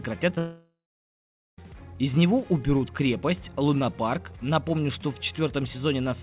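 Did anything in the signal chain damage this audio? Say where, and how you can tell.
Yes. At the network stage, short concealed packet loss occurs twice: a gap at 0.30 s and another from 0.35 to 0.37 s, each missing about 10 ms of audio. The receiver extended the preceding sound across each hole, so both points come through as a brief smear or wobble.

From 0.38 to 1.58 s, about 1.2 s of audio never plays. The last sound is stretched into a fading buzz or hiss, then roughly 0.84 s of near-silence follows before the audio resumes with that stretch gone. The likely cause is a long network dropout.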